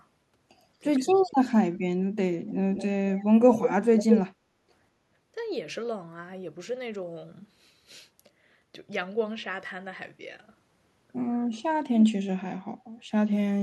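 Speech suppressed in double talk appears from 1.12 to 1.39 s in this speech recording. For roughly a third of a second the voice dips by around 20 dB, likely because an echo canceller, facing both sides talking at once, could not tell the local talker from loudspeaker echo and attenuated everything. Echo leak overlaps it from 1.15 to 1.32 s as a faint copy of the voice delayed by 231 ms and sitting far below the direct speech. It returns from 2.49 to 4.21 s much more strongly, delayed by 208 ms and nearly as loud as the talker. Both instances are likely residual loudspeaker sound that the far end's canceller failed to remove and sent back down the line. Background gated by the echo canceller follows from 4.33 to 4.68 s. The room sound drops by about 9 dB for a little under half a second while the canceller clamps the microphone during loudspeaker playback, then recovers once it releases.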